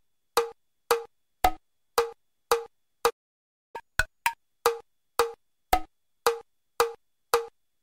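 At 3.09 s the sound cuts off in mid-flow and the output goes completely silent, resuming at 3.76 s after a gap of about 0.64 s. Nothing fades or decays into the gap; the audio simply halts and later continues. This is a playback stall, and the likely cause is that the player ran short of buffered data or had its audio thread blocked, leaving the output with nothing to play until it recovered.

Straight after the gap, from 3.76 s to 4.40 s, the audio rushes forward at twice normal speed, with its pitch lifted by close to ten semitones, giving a squeaky, chipmunk-like quality. This is catch-up at higher speed: the player works through the backlog left by the stall by resampling it faster, so speed and pitch rise together. Both drop back to normal at 4.40 s.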